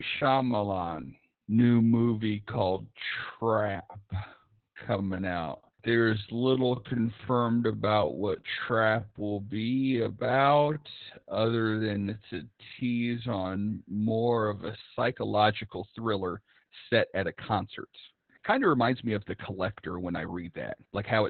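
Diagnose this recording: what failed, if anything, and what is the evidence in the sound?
Codec stage: Opus voice compression throughout. Nothing is present above 4.4 kHz, and the speech is heavily muffled and hoarse, which fits narrowband SILK at around 8 kbps.

Editing stage: from 0 to 14.9 s the speech drags at 0.544 times normal pace with pitch unchanged. This is likely a time-stretched section built by repeating short pieces.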